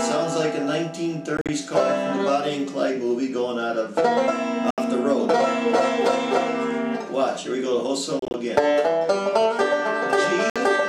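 Packets on the wireless link likely reached the headphones too late and were discarded, causing a Bluetooth dropout: the sound cuts to silence, then resumes further on as though it had kept playing. This happens four times:

At 1.37 to 1.49 s, 73 ms goes missing in several short gaps, the longest 44 ms.

At 4.71 to 4.78 s, 73 ms goes missing.

At 8.19 to 8.34 s, 87 ms goes missing in gaps, the longest 29 ms.

At 10.50 to 10.56 s, 58 ms goes missing.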